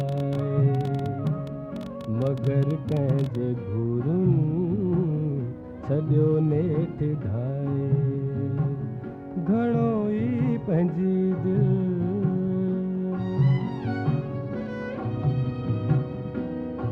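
From 0.01 to 3.36 s a train of clicks ticks over the sound, about 11.4 per second at an uneven pace, some forty in all, peaking roughly level with the audio. Their near-identical shape, unlike random crackle, points to likely interference or a faulty connection or power supply.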